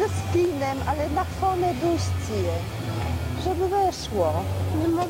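From start to end, a signal-following distortion sits only about 25 dB below the sound. The likely cause is low bit depth without dither: the audio was rounded to very few levels, which fits a 6-bit signal, so the rounding error tracks the waveform instead of forming neutral noise.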